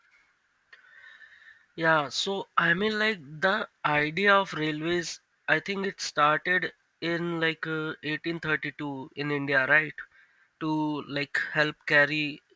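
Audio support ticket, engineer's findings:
Aliasing, whole clip. Sibilants gritty and metallic, spurious tones running up against a hard edge near 8 kHz, roughly 25 dB under the speech. Resampler without anti-alias filter; content above 8 kHz folded back, fits a 48 kHz to 16 kHz downsample.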